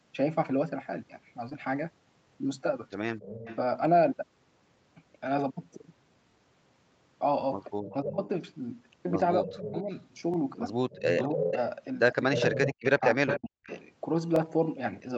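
Short concealed packet loss at 1.49 to 1.53 s: about 20 ms of the speech stream arrived too late for the decoder, and the receiver covered the gap by extending the preceding sound for roughly 16 ms before crossfading back into the real signal. The result is a brief smear, and whatever short sound fell in that window is softened or lost.

Overlapping chunks at 2.29 to 2.31 s, 6.31 to 6.34 s, 10.34 to 10.36 s and 14.36 to 14.39 s: the audio was handled in 4 s blocks, and each new block began about 25 ms before the previous one ended, so that sliver plays twice at every join. It comes through as a small stutter or click recurring every four seconds.

Echo leak at 3.20 to 3.57 s, 7.85 to 7.94 s and 9.52 to 13.83 s: a delayed copy of the speech returns roughly 0.28 to 0.30 s behind the original, likely because a loudspeaker on one side fed a microphone whose echo canceller failed to remove it. 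The first two are faint scraps, about 15 dB and about 20 dB below the speech. The long stretch from 9.52 s is much stronger, only about 5 dB down.

Speech suppressed in double talk at 8.02 to 8.28 s, 9.41 to 9.91 s and 11.34 to 13.21 s: with both sides active, the canceller likely could not tell the near talker from the returning echo and pulled everything down. The first two events dip the speech by about 15 dB for short spans. The third is severe, with drops near 40 dB across roughly 0.7 s in total.

Background gated by the echo canceller at 13.49 to 13.63 s: as the echo stretch ends, the canceller clamps the microphone hard, and the room tone falls away by up to about 33 dB for around 150 ms. It is heard as a sudden hole in the background that fills back in once the suppression releases. Throughout the clip, the Opus call path caps the audio at 8 kHz.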